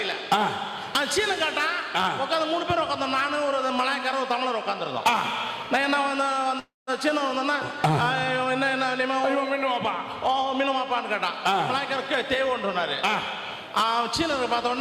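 An audio clip with a call audio freeze at 6.59 to 6.90 s: the last sound stretches into a fading buzz or hiss ending in about 150 ms of silence, then resumes where it stopped. That points to likely late packets emptying the jitter buffer. Unlike a dropout, nothing is lost; everything afterwards simply arrives about 0.28 s late.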